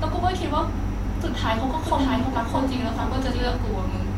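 A doubled audio track runs from 1.69 s to 3.57 s: a second copy of the speech sits roughly 0.7 s behind the original and around 5 dB quieter. It is likely a second capture of the same signal arriving over a slower path and being mixed in. The lagging copy is full-band and dry, with no room tail, so it sounds like a distinct overlapping repeat, and it appears and disappears abruptly at both edges.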